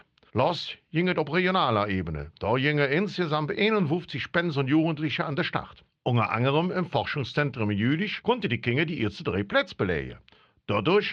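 Nothing goes wrong anywhere in this bit of speech, so there's no fault to point to at any moment.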